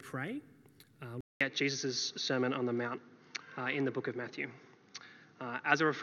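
Input switched to a poorer device at 1.21 s and stays so to the end. After a 200 ms silence, nothing remains above 6.5 kHz, so the sound turns dull and boxy. A modest level shift and a faint new noise floor accompany it, likely from recording moving to a narrower-band microphone.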